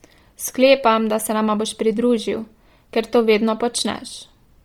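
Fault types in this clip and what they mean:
Bluetooth LC3 compression: speech sounds heavily grainy and breathy throughout, likely from LC3 near 32 kbps replacing upper bands with noise fill, seen as smeared blocks on a spectrogram.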